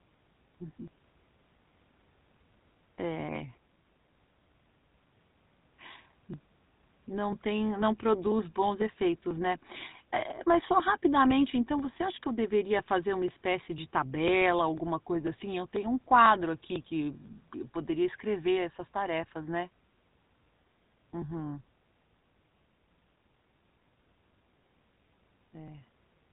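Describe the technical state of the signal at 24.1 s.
At 24.1 s you're inside a run of periodic USB or driver dropouts that starts at 0.38 s and continues to 26.17 s. Something on the system is stalling the USB bus or audio driver on a fixed cycle, so every 0.50 s or so a sliver of audio, around 4 ms, gets skipped outright. With roughly fifty of these across the span, you hear a steady ticking or popping that rides along with the speech and only shows up while there's signal.

Sitting under that the whole way through is GSM full-rate codec damage, and it's plainly audible here too. The codec rebuilds speech from a vocal-tract model excited by evenly spaced pulses, throwing away most of the excitation detail, and nothing gets through above about 3.8 kHz. The result is that dull, band-limited sound with a buzzy, gravelly roughness on the voice, which fits the 13 kbps GSM full-rate coder.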